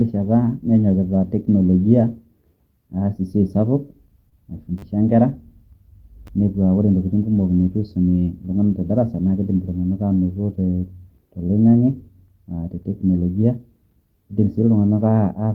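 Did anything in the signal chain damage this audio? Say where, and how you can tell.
Yes. Short concealed packet loss at 4.29 to 4.34 s, a network and decoder fault: about 20 ms of speech arrived too late, so the receiver extended the preceding sound for roughly 22 ms and crossfaded back, leaving a brief smeared wobble.

A repeated buffer, a driver or buffer-stage fault, appears at 4.78 to 4.82 s, where one tiny slice loops four extra times with hard joins, and again at 6.27 s with one repeat. The clicky buzz fits a 10 ms buffer starved of new audio.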